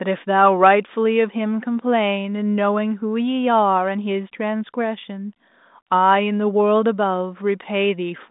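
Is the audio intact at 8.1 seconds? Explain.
Yes, the audio is intact at 8.1 seconds, with nothing there beyond the narrow telephone band, about 200 Hz to 3.7 kHz, of the G.726 ADPCM path at 40 kbit/s.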